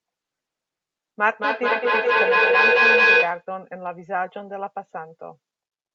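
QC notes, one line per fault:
1.38–3.49 s, feedback echo between two devices: the speech comes back roughly every fifth of a second, each pass thinner and more ringing, building to about 9 dB above the speech instead of fading. A single room echo would die away; here a second device replays it, outside either canceller's reach.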